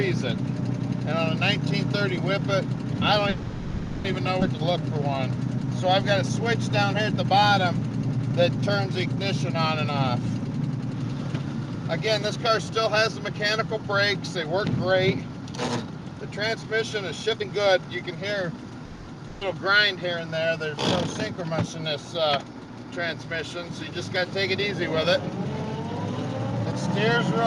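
From 3.29 to 4.06 s the sound stalls into a held, fading sound lasting about 750 ms, then carries on exactly where it stopped with nothing lost. This is a call audio freeze, likely from packets held up in transit until the jitter buffer ran dry and the receiver filled the wait by extending the last sound.

At 4.40 s playback jumps forward. About 0.4 s of audio vanishes and the two sides are spliced almost directly. This skip ahead happened because a stretch was discarded while later audio was already queued, which also cut about 0.4 s of the delay the freeze had added.

From 4.72 to 5.88 s and again from 7.40 to 9.34 s the audio drags slightly, at 96% and 97% speed with the pitch unchanged. These are jitter buffer slow-downs: the receiver repeated single pitch periods to build a reserve, adding 57 ms and 67 ms.

From 10.48 to 18.85 s everything runs a little hurried at 105% speed. This jitter buffer speed-up trimmed short pitch-period slices, about 0.4 s in all, to shrink an oversized buffer.

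A second freeze follows at 18.85 to 19.09 s, a 220 ms drawn-out fade. As before, it was likely caused by a late packet arrival, and nothing is lost.

At 19.27 to 19.43 s a burst of packet loss leaves a 140 ms held, dimming tail before the sound resumes further on, with that 140 ms missing.

From 26.51 to 27.16 s a sharper speed-up at 123% makes the sound noticeably rushed, as about 150 ms is cut to reduce delay.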